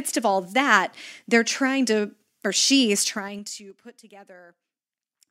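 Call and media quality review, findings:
Zipper noise, 3.02 to 3.81 s: ticking rides on the speech as the level drops around 20 dB in 3 dB steps, about ten a second. Gain stage probably stepping per buffer, no smoothing, so each jump clicks.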